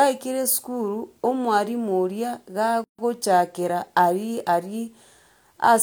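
At 2.84 s the speech breaks for about 145 ms, until 2.99 s: a gap at a join of encoded pieces. Two separately encoded segments were spliced untrimmed, leaving encoder delay and end padding as silence. Unlike a dropout, nothing is lost, and the speech resumes exactly where it stopped.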